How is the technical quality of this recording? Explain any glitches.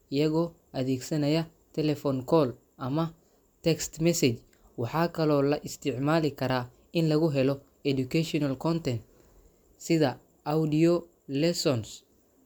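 Nothing in the recording stood out as a technical problem on listening.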